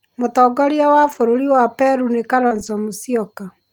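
This speech clip has two stretches of lost packet rebuilt from error correction, at 1.03 to 1.17 s and 2.51 to 2.69 s. Each was played from the low-bitrate copy carried in the following packet, so there is no gap, but about 80 ms and 100 ms respectively sound rougher and noisier, which fits runs of four and five lost packets. Just before the second stretch, at 2.47 to 2.53 s, a short concealed packet loss left about 40 ms missing. The decoder extended the preceding sound for about 33 ms and blended back, heard as a brief smear.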